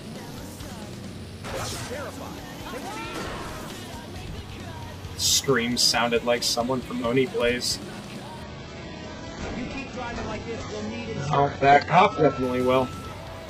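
The audio has an adaptive stream at a lower bitrate from 8.43 to 12.43 s: quality switches abruptly without a gap, artefacts rise, and nothing remains above 8 kHz, consistent with a very low-bitrate HE-AAC substream after a connection slowdown.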